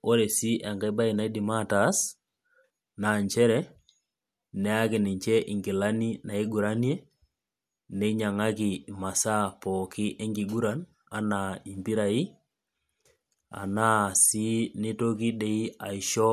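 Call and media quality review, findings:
Nothing stood out on listening to the speech in this recording.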